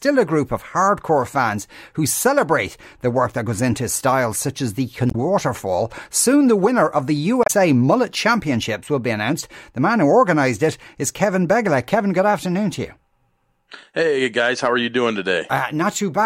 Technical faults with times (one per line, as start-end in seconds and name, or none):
5.08-5.15 damaged data in a compressed stream
7.43-7.50 damaged data in a compressed stream